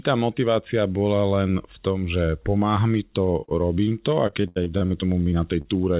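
From 3.44 to 5.67 s the speech turns choppy and robotic, with brief holes throughout. This is repeated packet loss: about fifteen gaps, the longest 79 ms, each patched by extending the preceding sound, concealing roughly a sixth of the stretch, all within the call path's band-limited sound that stops at 4 kHz.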